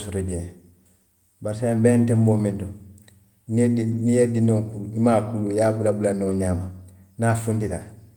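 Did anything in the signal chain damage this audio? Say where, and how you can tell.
Yes. In the network stage, packets were lost, and the lost packets were rebuilt from error correction carried in the packets that followed. The audio never drops out, but the speech turns rougher and noisier at 2.51–2.57 s, 3.91–4.01 s and 6.29–6.31 s, just after "bulanna wo". The rebuilt audio comes to 40, 60 and 20 ms, which fits two, three and one 20 ms packets.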